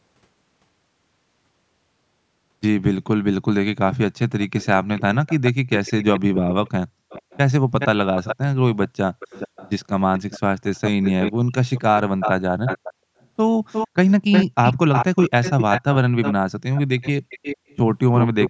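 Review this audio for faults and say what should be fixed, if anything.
From 3.94 s onward there's an echo leak: the speech repeats 357 ms later, about 5 dB quieter, likely a speakerphone's echo canceller letting it slip back. A headset on that end, or better echo cancellation there, would stop it.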